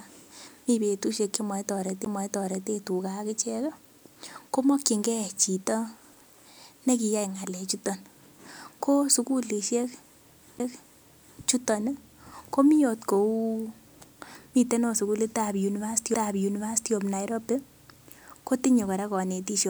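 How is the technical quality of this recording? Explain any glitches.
Three CD skips mar the speech, at 2.05, 10.59 and 16.14 s. Each time a knock or a flaw made the laser jump onto another turn of the disc's spiral. The player muted very briefly, roughly 15, 10 and a couple of milliseconds, then resumed elsewhere, producing a tick and an abrupt jump in the speech.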